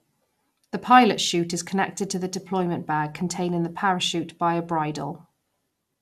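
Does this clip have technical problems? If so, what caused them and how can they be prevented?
Yes. Throughout the speech there is generation loss: the sound is swirly, smeared and hollow, with blurred consonant attacks. It was likely decoded and re-encoded about three times with a lossy codec, and the character fits MP2 at around 96 kbit/s. Each pass re-quantised on a shifted frame grid, so the errors built up. A spectrogram shows a hard ceiling at 15.2 kHz, and the waveform's transients look softened. To prevent this, keep a lossless master and encode only once, at the final step.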